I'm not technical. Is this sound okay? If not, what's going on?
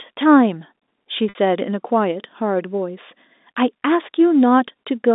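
No. At 1.29 to 1.35 s there is packet loss with pitch repetition: about 60 ms of audio went missing, and the receiver repeated the last pitch cycle, giving a brief buzzy hold.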